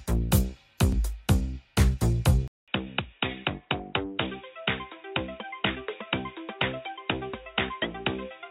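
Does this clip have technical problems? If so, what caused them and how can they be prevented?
Yes. At 2.48 s the sound drops out for 200 ms, then returns duller and boxier to the end, with nothing above 3.8 kHz, a level roughly 10 dB lower and a new noise floor roughly 40 dB down. This likely means the input switched to a poorer device. A spectrogram shows the upper band cut off flat after the gap, and the waveform shrinks. Locking the input device before recording prevents this.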